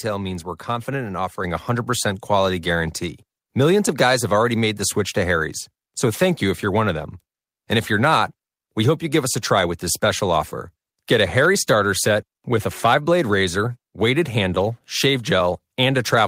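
At 1.44 s, just after "means we're confident in", the microphone volume stepped up: the call software judged the input too quiet and raised the device's input level in a single step of about 5 dB. The voice and the room background jump louder together, at the same instant, mid-sentence. That shared, instant lift sets it apart from a talker simply speaking louder or from a gradual automatic gain ramp, where the background stays put or the change creeps in.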